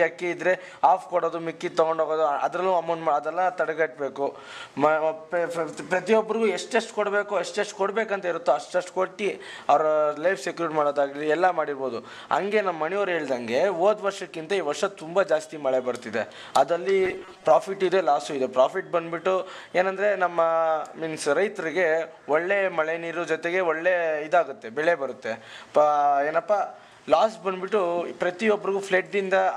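Robotic sound from repeated short buffers appears from 17.0 to 17.44 s. For under half a second the sound turns into a rigid, metallic buzz pitched at 188 Hz, while its rough contour still shows through. The likely cause is new audio arriving too slowly, so playback keeps looping the most recent slice of roughly 5.3 ms, and the buzz frequency is one over that length. About half the material in this stretch is repeats that stand in for skipped audio.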